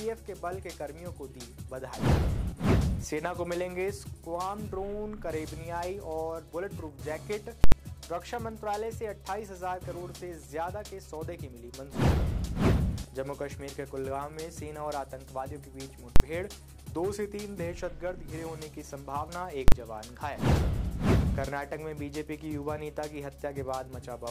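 Sample clock jitter runs through the whole audio: the converter's clock wanders by a few microseconds, so each sample is taken a little early or late, and the timing error grows with the waveform's slope. The result is a roughness around 40 dB below the signal that rises with loud and high-frequency sound and disappears in silence. Invalid numbers at full scale strike at 7.64 to 7.72 s (an 80 ms block) and at 16.16 to 16.2 s and 19.68 to 19.72 s (40 ms each): a calculation produced infinite or invalid values that snapped to an extreme, holding the output flat for each block and heard as a very loud bang.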